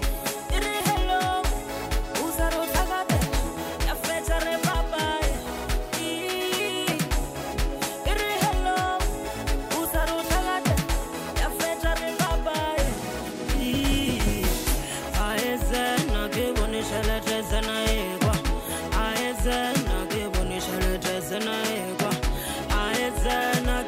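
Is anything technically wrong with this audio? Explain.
Yes. From 15.9 s to the end, the audio shows crude rate conversion. A gritty, inharmonic fizz rides on the louder and brighter passages. This fits a conversion from 44.1 kHz to 48 kHz by plain linear interpolation between samples, with no anti-imaging filter. The interpolation error repeats with the ratio of the two rates, creating spurious tones roughly 30 dB below the signal. Unlike steady hiss or dither noise, this fizz tracks the signal's level and brightness and falls away in quiet moments.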